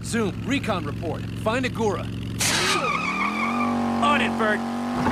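No technical faults are audible.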